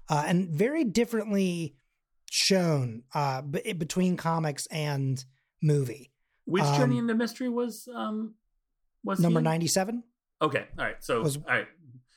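No technical faults are audible anywhere here.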